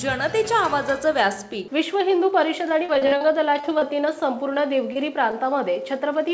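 Packets were lost or arrived late again and again from 2.69 to 3.84 s, producing repeated packet loss (robotic sound). The receiver kept patching short holes of up to 39 ms by extending the preceding audio, so about a fifth of that stretch is filled-in sound and it turns choppy. A short concealed packet loss at 4.92 to 4.98 s left roughly 30 ms undelivered, and the gap was bridged by continuing the previous sound before blending back, which gives a brief smear or wobble. The audio travels over a WebRTC-style call path whose G.722 coding leaves nothing above 8 kHz.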